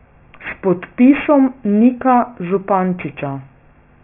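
Aliasing runs through the whole clip: the speech was resampled down, which fits a drop to a 6 kHz rate, with no low-pass filter first, so energy above 3 kHz folds back to false, unrelated pitches, roughly 20 dB under the speech, leaving sibilants gritty and metallic.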